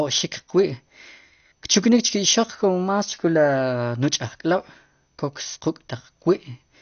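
Throughout the speech, a dull, gurgling, granular texture points to likely MP2 compression at a bitrate around 48 kbps; the spectrogram shows nothing above 6.5 kHz and flickering upper bands.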